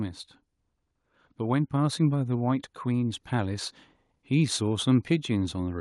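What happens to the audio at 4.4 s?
Nothing goes wrong at 4.4 s; the speech continues without any dropout, click, distortion or other audible fault at that moment.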